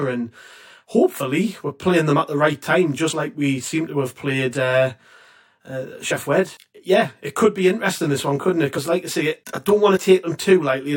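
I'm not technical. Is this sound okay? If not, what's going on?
No. The whole clip has channel delay (comb filtering): one side arrives about 20 milliseconds late, and when the two sides get mixed together, certain pitches cancel out. That leaves the speech sounding rough and slightly doubled from start to finish.

There's also compressed frames skipped, four times: at about 3.09 s, 6.08 s, 8.72 to 8.78 s, and 9.94 s. Each time a tiny piece of audio is simply missing, a few hundredths of a second, a bit longer at 8.7 s, so the speech jumps forward.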